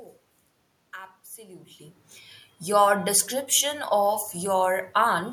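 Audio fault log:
Nothing's wrong here: the room's background noise belongs to the recording, and the change in level around 1.5 s is just the talker shifting position at the mic.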